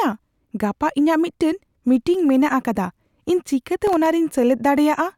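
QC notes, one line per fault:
3.87–4.06 s, processor overload crackle: for about 0.19 s the processor misses several deadlines for very short buffers, well under a millisecond each, leaving tiny hard-edged silent gaps. They form a gritty burst over the speech, unlike a single dropout's one clean click.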